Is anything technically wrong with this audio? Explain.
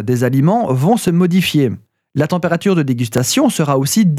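Yes. From 1.08 to 3.18 s, after "des aliments vont", about three regular clicks recur every 1.05 s, likely clock drift buffer slips dropping or repeating a few dozen samples.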